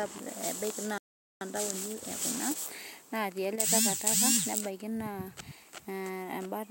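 At 0.98 s the speech cuts to silence for about 430 ms, resuming at 1.41 s. This playback stall likely came from the player starving of data.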